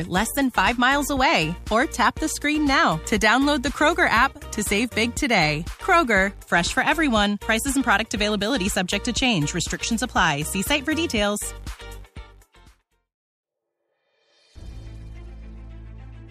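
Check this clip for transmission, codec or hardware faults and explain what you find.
No transmission, codec or hardware faults.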